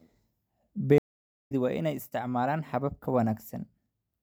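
At 0.98 s the speech cuts to 0.52 s of silence, then resumes at 1.52 s on "waa inay isticmaalaan habab", roughly 0.4 s further along. This is a stream reconnect: the connection dropped, and the player rejoined mid-stream with a fresh decoder.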